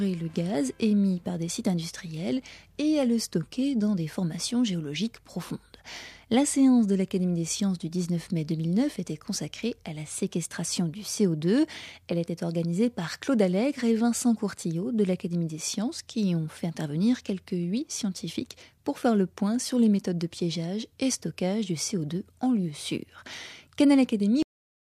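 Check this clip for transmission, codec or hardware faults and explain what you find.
One fault stands out: a cut-off end. At 24.43 s the sound stops mid-event and falls straight to digital silence for the last half second. The final buffers were never written or played. Nothing decays, so the sound ends abruptly.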